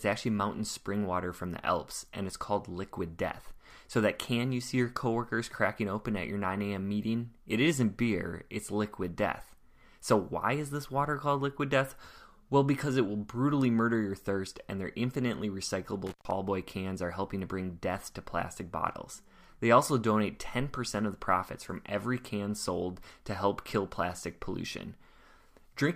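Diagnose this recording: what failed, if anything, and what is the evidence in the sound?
An intermittent contact in the analogue wiring failed: a loose cable or plug briefly lost connection. Between 16.07 and 16.31 s the speech cuts out, with crackle at both edges and about 127 ms of faint hiss while the circuit is open.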